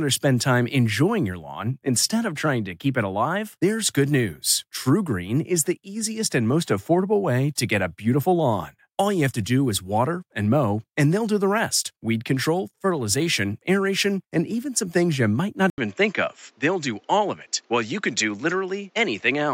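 Speech, with a fault at 15.7 s, right after "things you might not": an 80 ms gap, then the sound narrows to nothing above 7.6 kHz, with a new noise floor well below the signal and little level change. Likely an input switched to a poorer device.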